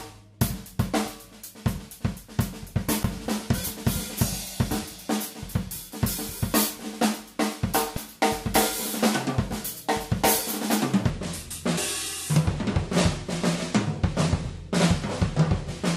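The audio has damaged data in the compressed stream at 2.67 to 3.05 s and briefly at 5.92, 7.97 and 11.77 s: abrupt glitches heard as chirps, squawks, clicks or short holes, unlike gradual dropouts. From 11.10 s a section plays at the wrong speed, about 0.8 times, roughly four semitones deeper, with pitch and tempo slowing together, likely from a wrong playback clock.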